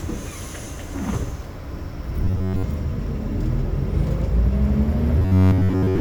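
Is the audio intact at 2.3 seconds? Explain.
No. From 2.25 to 2.64 s the sound has robotic sound from repeated short buffers. A fixed 93.8 Hz buzz is imposed on it for most of that span, likely because fresh audio arrived too slowly and the playback repeated the last tiny chunk, about 10.7 ms, in place of the skipped material. On a spectrogram this shows as evenly spaced harmonic stripes at multiples of 93.8 Hz. The waveform shows a roughly similar short shape cycling over and over.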